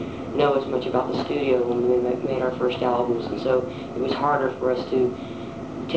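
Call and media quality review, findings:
No findings: the call path comes through as wideband call audio with nothing above 8 kHz, which fits a G.722 codec.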